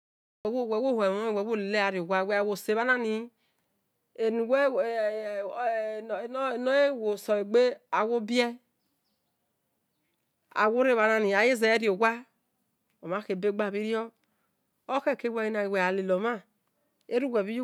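A speech recording with a cut-off start: digital silence runs from 0.0 to 0.45 s, then the speech enters mid-sound with no attack or fade, because capture began late. Unlike a dropout, nothing before the gap is lost; unlike a gate, nothing ramps in.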